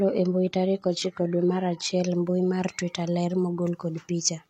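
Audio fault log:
0.0–2.0 s, adaptive stream starting at a low bitrate: the opening sounds thin and smeary, with synthetic-sounding treble that fits a low-rate HE-AAC version, then quality jumps without any gap just before "mbui mar twitter ler", to something like 96 kbit/s AAC-LC with content reaching up to about 14.9 kHz.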